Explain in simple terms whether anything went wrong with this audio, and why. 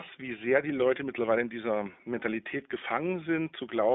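Something did go wrong: the speech has been through the iLBC codec for the whole clip, and you can plainly hear it. The sound is squeezed into a narrow phone-line band, with nothing above about 3.6 kHz and little below 200 Hz, so it's muffled and thin. The codec rebuilds the voice in 20 ms chunks, each handled on its own, which leaves a slightly rough, synthetic texture. The call microphone's bass trimming is separate and normal.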